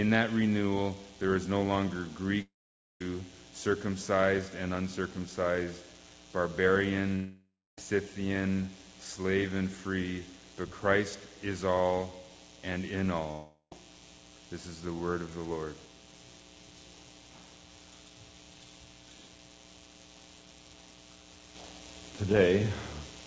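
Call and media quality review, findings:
Audio gaps at 2.42–3.01 s, 7.15–7.78 s, 13.31–13.72 s. Likely long network dropout. Fading concealment buzz, then silence (about 0.51, 0.28, 0.09 s). Missing audio never replayed. Band ends at 8 kHz, fitting a G.722 WebRTC call path.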